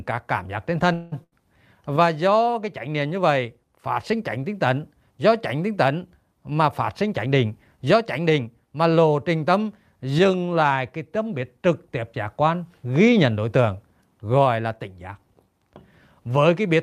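From 0.93 to 1.14 s the speech stalls into a fading buzz or hiss for about 180 ms, then resumes where it left off; this call audio freeze was likely caused by delayed packets draining the jitter buffer. At 1.24 to 1.41 s a burst of packet loss leaves a similar held, fading sound, but here roughly 80 ms of speech is skipped. A jitter buffer speed-up trims pitch periods at 6.51 to 6.62 s, running at 149% and removing about 50 ms, then again at 7.03 to 8.63 s at 108%, dropping about 150 ms. The speech sounds hurried but keeps its pitch, unlike a simple speed change.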